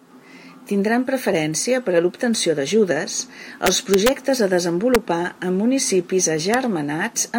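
Speech with integer overflow at three points. The first runs from 3.66 to 4.09 s, right after "per a l'obtenció d'ajudes", where loud peaks are pushed about 2 dB past the integer limit. Instead of being held at full scale, each peak wraps around to the opposite sign and gives violent cracks. Shorter crack events follow at 4.95 s (about 1 dB over) and 6.54 s (right at the limit). These are much harsher than ordinary clipping, because the samples jump across the whole range.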